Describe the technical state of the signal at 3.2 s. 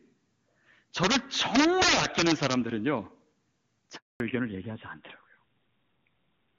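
At 3.2 s the speech is intact, with no dropout, clipping or other fault, and its clear wideband quality fits AMR-WB HD Voice coding at a high rate, around 23.85 kbit/s.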